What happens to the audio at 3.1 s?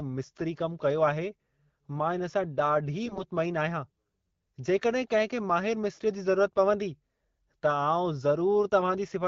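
From 3.06 to 3.22 s there are AMR bit errors: roughly 7 percent of the less protected bits in 7 of the 20 ms AMR-WB frames arrive flipped, misplacing excitation pulses and skewing fine pitch, gain and spectral values, so speech turns briefly hoarse, scratchy and gargly.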